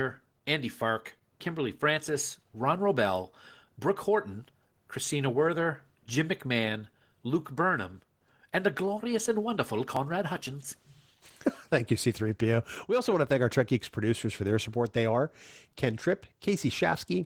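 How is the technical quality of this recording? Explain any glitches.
The recording carries audible compression damage throughout and has three brief skips in its second half.

Opus voice compression: The whole clip has been squeezed through Opus in hybrid mode, with a linear-prediction coder handling the lower band and a transform layer above 8 kHz. At a rate that points to around 16 kbps, the excitation is coded coarsely, so the coding damage is plainly audible throughout, even though content still reaches the full band.

Dropped buffer (overrun): At 9.97 s, just after "the glorious and wonderful", and again at 11.5 s and 12.69 s, the audio jumps abruptly. This is likely caused by the capture program failing to collect its samples before the hardware overwrote them. Each lost stretch was spliced shut with no gap: about 10 ms, about 5 ms and about 10 ms respectively. Each join is heard as a sudden skip forward in the sound.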